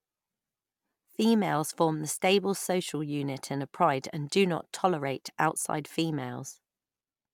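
Nothing in the speech stood out as a technical fault on listening.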